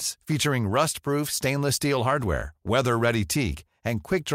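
Nothing stood out on listening to this recording.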